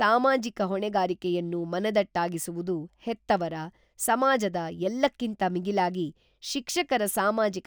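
Throughout the speech there is imaging from linear upsampling. Straight-line interpolation, which fits a rate raised from 24 kHz to 48 kHz, dulls the top band and leaves a mirrored spectrum at 12 to 24 kHz, roughly 25 dB down, visible on a spectrogram and heard as faint metallic shimmer on sibilants.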